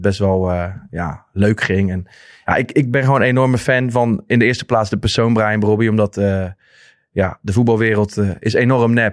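Nothing stood out on listening to this speech recording; no technical fault could be heard at any point.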